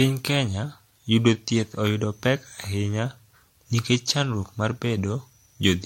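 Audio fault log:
throughout, generation loss: likely about seven MP3 re-encodes near 64 kbit/s, stacking quantisation noise, leaving swirly, hollow speech, blurred attacks, nothing above 16.5 kHz.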